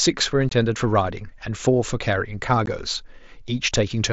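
A speech clip with two short dropouts from unconcealed Bluetooth headset packet loss. The first runs from 0.50 to 0.52 s, a gap of about 22.5 ms. The second hits at 2.66 s and lasts 15 ms. Each gap has hard edges. Voice packets between headset and phone went missing, and nothing filled them. The lengths fit three and then two lost mSBC packets. That codec's light graininess and 8 kHz ceiling run through the speech around the gaps.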